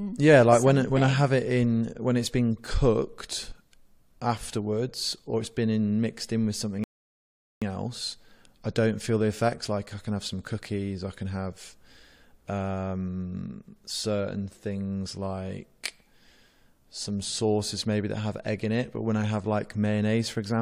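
At 6.84 s, right after "mixed in with something", the speech stops dead in a rebuffering stall. Silence holds for about 0.78 s while the player waits for more data. It resumes at 7.62 s with "else I don't feel". Nothing is skipped, so time is added.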